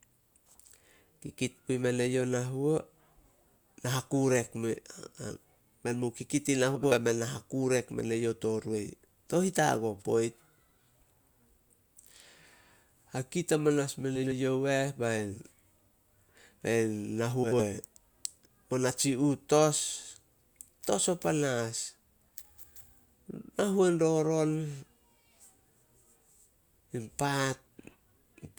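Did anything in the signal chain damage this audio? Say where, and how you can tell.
Yes. The speech turns briefly into a garbled flutter at 6.75–6.96 s, 14.16–14.33 s and 17.43–17.62 s. This is frames out of order from the network: two neighbouring 80 ms blocks were swapped and decoded that way, without losing time.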